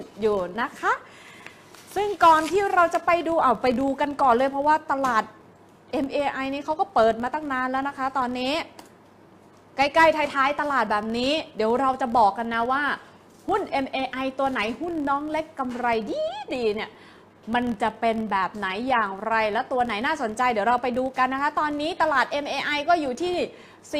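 From the start of the clip to its end, a filter restarted on every block runs through the whole sound. The filter discards its internal state at each block boundary and begins again from silence, so every block opens with a small transient. These ticks repeat at 43.1 Hz, which fits a 1024-sample block, and blur into a low buzz that rises and falls with the level of the sound.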